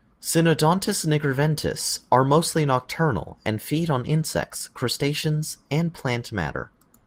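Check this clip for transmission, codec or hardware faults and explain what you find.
Nothing here sounds amiss: the speech carries only the light coding texture you'd expect from Opus voice compression in its hybrid mode, with the full bandwidth kept, which fits a setting of around 24 kbps.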